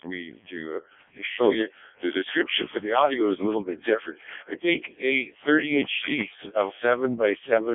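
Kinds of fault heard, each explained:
Codec 2 vocoder: the speech has been through a very low-rate digital-radio vocoder, apparently around 0.7 kbit/s, which transmits only pitch, voicing, energy and a coarse spectral envelope rather than the waveform itself. The decoder rebuilds each frame from synthetic sine components, so throughout the clip the voice sounds heavily robotic and buzzy, band-limited to roughly 150 Hz to 3.6 kHz with nothing above 3.7 kHz, and natural texture is badly smeared.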